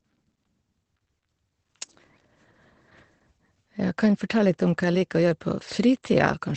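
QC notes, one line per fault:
Throughout, Opus voice compression. Nothing comes through above 8.6 kHz. The speech sounds muffled, hoarse and slightly robotic. A linear-prediction coder rebuilds the voice from a coarsely coded excitation. The plainly audible damage fits a low bitrate near 12 kbps in wideband mode.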